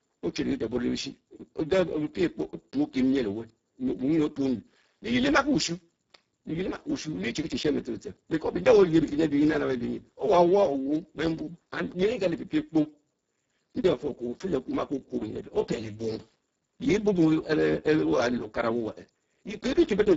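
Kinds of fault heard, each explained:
Speex codec: a low-bitrate CELP encoding, which fits roughly 6 kbps, starves the excitation, leaving this speech hoarse and noisy, with nothing above 7.7 kHz.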